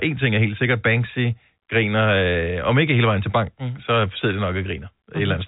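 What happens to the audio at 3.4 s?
Nothing goes wrong at 3.4 s: the speech runs on intact through that moment, carried by telephone-style G.711 coding, with its usual band limit near 3.8 kHz.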